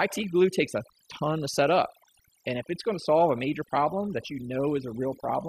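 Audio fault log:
throughout, overdone noise removal: the gaps between phrases drop to near silence dotted with twinkling specks. A noise reduction stage was pushed too hard on a noisy recording, so it cuts individual frequency bands down or out whenever their level sits close to its noise estimate. The quieter parts of the voice fall into that range and get removed along with the noise, while stray bands flicker through as chirps.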